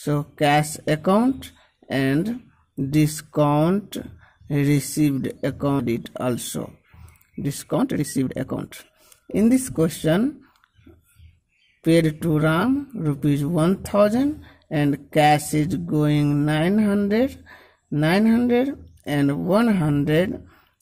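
Skip ahead at 5.79 to 5.81 s: roughly one and a half seconds of audio is dropped, and playback jumps straight to later material with no gap. Jitter buffer speed-up from 7.30 to 10.74 s, and again from 11.22 to 12.15 s: the receiver trims short pitch-period pieces to drain an overfull buffer. The sound runs about 20% fast, then 6% fast, at unchanged pitch, removing roughly 0.7 s and then a few tens of milliseconds.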